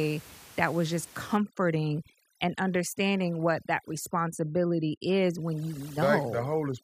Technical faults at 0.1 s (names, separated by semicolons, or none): none